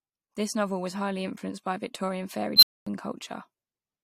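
At 2.56 s the speech is interrupted by an unstable filter. A recursive filter's feedback runs away. A high squeal near 4 kHz swells over about 65 ms and clips. The output then overflows, leaving 240 ms of silence until 2.87 s.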